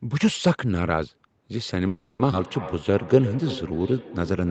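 Feedback echo between two devices runs from 1.53 s to the end of this speech clip: each stretch of speech returns roughly every third of a second, thinner and ringing, peaking at about 13 dB below the speech. A second device in the room is replaying the call into a microphone whose echo canceller only removes its own playback. A call audio freeze from 1.87 to 2.22 s holds the sound as a fading buzz or hiss for 320 ms, with nothing silent and nothing lost, before speech resumes where it stopped. The likely cause is delayed packets draining the jitter buffer, which adds 320 ms of delay. A skip ahead at 2.31 to 2.35 s then jumps over roughly a fifth of a second of speech, with a gap of only 10 ms at the join. Audio is dropped while later audio is already waiting, cutting the delay by around 150 ms. A jitter buffer slow-down from 2.73 to 4.00 s plays speech at 88% speed with unchanged pitch, stretching sounds. 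It repeats single pitch periods to rebuild a reserve, adding 164 ms in total.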